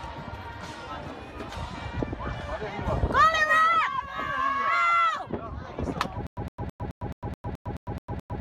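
From 6.27 s to the end, a 111 ms burst repeats every 214 ms with about 103 ms of silence between: a stutter with silent gaps, likely a stalled stream replaying its last fragment.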